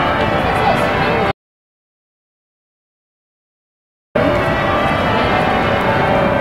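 At 1.32 s the input feed was likely lost, through a dropped connection or an accidental mute, while recording carried on writing silence. The result is an audio dropout to silence: the sound cuts off abruptly and leaves 2.83 s of dead, tone-free silence before resuming mid-flow at 4.15 s.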